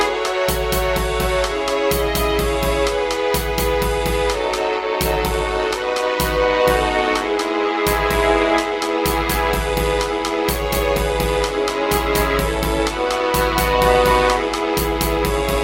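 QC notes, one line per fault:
4.45–15.64 s, overlap-add ripple: frames rejoined with mismatched overlap gain, so level swings about 6 dB at around 100 Hz, heard as a metallic buzz with extra tones around each note.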